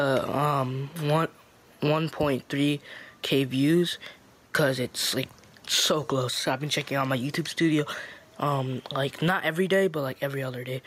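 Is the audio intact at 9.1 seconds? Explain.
No. Gain pumping runs through the whole clip, so it is present at 9.1 seconds as well. The level breathes by roughly 5 dB, and loud and soft passages sit unnaturally close together. The likely cause is input gain set far too high, with a fast limiter or compressor clamping down on every peak and releasing between them, leaving the sound squashed.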